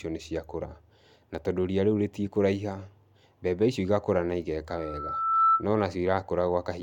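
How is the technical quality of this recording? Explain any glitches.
The recording has one clear fault, a loudspeaker feedback squeal from 4.68 to 5.65 s, starting just after "mbembe icio igakũra na". The microphone is picking up a loudspeaker it feeds, and at 1.3 kHz the loop gain tops one, so that tone grows over roughly three quarters of a second until it stands about 10 dB above the speech. Unlike a steady interfering tone or hum, it swells from nothing at a single pitch before it stops.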